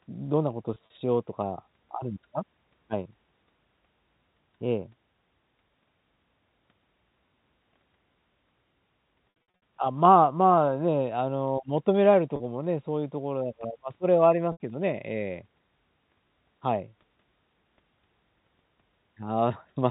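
Brief buzzy holds break the speech at 0.74 to 0.90 s, 9.30 to 9.52 s, 12.36 to 12.40 s and 14.52 to 14.60 s. The second is the roughest: 240 ms lost across 320 ms, with runs up to 60 ms that start to fade toward silence. This is packet loss with pitch repetition. The receiver loops the last pitch period to cover each gap, in steps that fit 20 ms packets, over the band-limited G.711 telephone coding.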